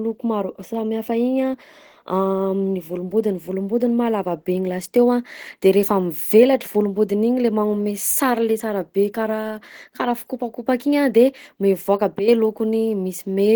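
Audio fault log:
Throughout: Opus compression, likely in hybrid mode at roughly 16 kbps; speech sounds hoarse and grainy, with spectrogram harmonics smeared and upper bands filled by diffuse noise.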